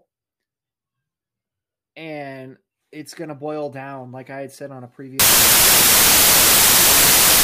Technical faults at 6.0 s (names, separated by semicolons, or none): samples built from the wrong bytes